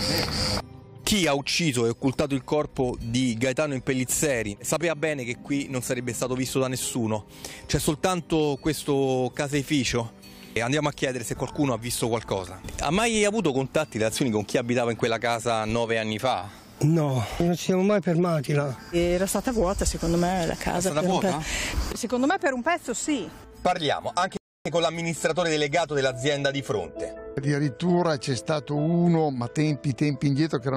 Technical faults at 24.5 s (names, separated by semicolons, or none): rebuffering stall